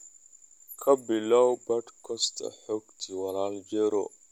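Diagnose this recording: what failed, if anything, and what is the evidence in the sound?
Nothing failed: no stage in the chain leaves a detectable trace anywhere in the recording.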